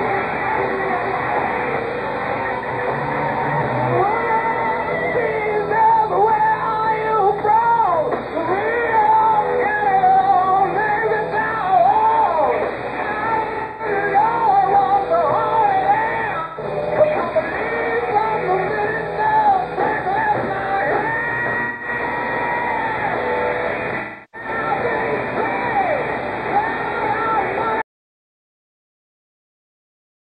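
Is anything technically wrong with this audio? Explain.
Yes. From 13.45 to 13.86 s, 16.39 to 16.81 s, 21.64 to 21.88 s and 23.99 to 24.48 s there is AAC frame loss with concealment. The decoder rebuilt missing frames from the last good spectrum, leaving smeared, noisy or phasey patches. The first two are scattered losses whose longest runs reach about 150 ms.

At 27.82 s the sound cuts to silence and stays silent to the end, with no room tone. This is an audio dropout to silence, likely from a lost input or mute while recording continued, so that material is gone.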